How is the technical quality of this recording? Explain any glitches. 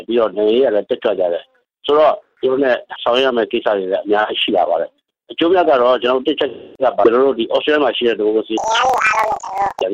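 One fault stands out, near the end. Planar audio read as interleaved, from 8.58 to 9.84 s: each block stores all left samples and then all right, but is read as alternating pairs. Each roughly 43 ms block, which fits 2048-sample blocks, therefore plays twice at double speed. The sound jumps an octave high with a flutter at about 23 Hz.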